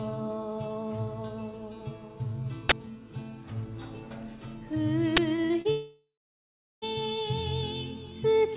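At 2.69 to 2.72 s a sudden, loud burst of harsh digital noise cuts through the sound. This is an uninitialised buffer: the output played a block before any audio had been written to it, so whatever was left in memory was sent out as samples. The burst lasts about 24 ms, which fits a 1024-sample buffer. A second, shorter burst of the same kind hits at 5.17 s. It lasts about 12 ms, which points to a 512-sample buffer.

From 5.36 to 5.67 s the sound turns choppy, with small pieces dropping out. This is repeated packet loss, heard as robotic sound. Four gaps arrive in quick succession, the longest about 33 ms. Each one is patched by stretching the last received sound before the next gap lands. About 87 ms of the 0.3 s stretch is filled in this way, roughly 28 percent of it.

Almost immediately after, at 5.71 s, the sound gives way to a decaying buzz that thins out and then drops into silence. 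It returns at 6.84 s, and the material from that stretch of about 1.1 s never comes back. The likely cause is a long network dropout. The receiver first continued the last sound and then let it fade, leaving about 0.74 s of silence. The call path's G.711 mu-law coding can be heard throughout as a band limit with nothing above 4 kHz.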